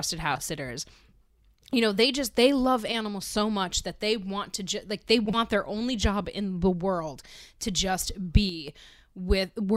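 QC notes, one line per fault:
0.35–0.42 s, frames out of order: two neighbouring 20 ms blocks play swapped, so this short stretch comes out as a garbled flutter with no time lost.
2.92–3.35 s, one channel drops out: right after "they love" the level drops by about 6 dB until "much that they want", likely because one channel was lost and the mono sum halved.
5.25–5.36 s, frames out of order: after "like they", two 40 ms runs play in swapped order before "their only job in", giving a scrambled flutter with no time lost.
8.49–8.68 s, one channel drops out: just after "the world to just" the level falls by about 6 dB for this short stretch, likely one channel briefly missing from the mix.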